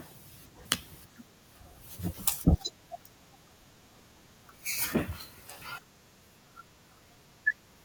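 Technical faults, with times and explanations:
0.66 s and 5.62 s, damaged data in a compressed stream: at each point a short glitch cuts into the speech, lasting around 10 ms. Corrupted bytes in the compressed stream make the decoder misread those frames and lose sync until it finds a valid frame header.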